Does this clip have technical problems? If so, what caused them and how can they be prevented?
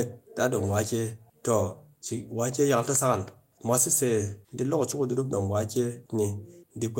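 No, nothing stood out as a technical problem on listening to this speech clip, so there is nothing here that needs preventing.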